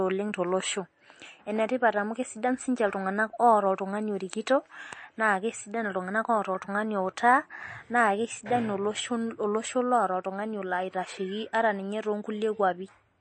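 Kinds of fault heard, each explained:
MP3 compression: the speech was likely passed through an MP3 encoder starved of bits, which fits a rate near 34 kbps. It cuts everything above 8.3 kHz and zeroes weak frequency lines frame by frame, so the whole clip sounds dull, watery and swirly.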